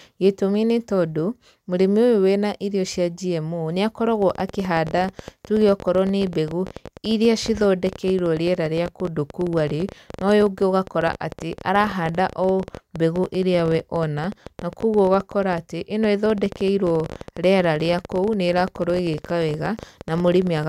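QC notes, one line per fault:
4.22–20.65 s: train of clicks. Some two hundred near-identical pulses arrive at an uneven pace averaging 14.3 per second, heard as a rough ticking that carries on through the speech and into the pauses, with peaks a few decibels above the speech itself. On a spectrogram they show as thin full-height vertical lines at irregular spacing; on the waveform, as sharp spikes of similar shape. The likely source is interference from nearby equipment or a faulty connection or power supply.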